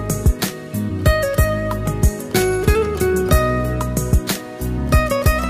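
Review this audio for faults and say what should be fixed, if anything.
Sample clock jitter runs throughout the clip. The converter's clock wanders by around 2 microseconds, so samples land early or late at random. The error follows the waveform's slope, adding a hiss that rises with loud, high content, roughly 35 dB below the signal. To prevent it, use a stable, low-jitter clock source for the converter.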